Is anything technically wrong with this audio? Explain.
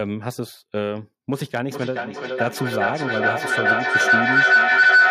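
Yes. From 1.4 s to the end there is feedback howl. The microphone picks up a nearby loudspeaker on the same call, and each trip round the loop gains level, so the sound narrows to a tone around 1.5 kHz, pulsing roughly every 0.4 s and rising to about 10 dB above the speech.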